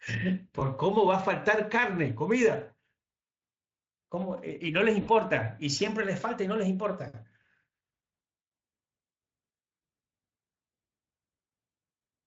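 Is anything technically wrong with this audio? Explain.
Yes. There are two brief dropouts from VoIP packet loss concealed by the speech codec, at 0.59 to 0.69 s and at 5.01 to 5.10 s. About 20 ms of audio is lost in the first and about 60 ms in the second, which fits one and three 20 ms frames. With no new data, the decoder extends its last pitch and filter at a falling gain, so the speech smears into a short buzzy tone or coloured noise that fades. Because each frame builds on the last, the voice stays weak or distorted briefly after packets return. The Speex coding underneath adds only a light, mild roughness.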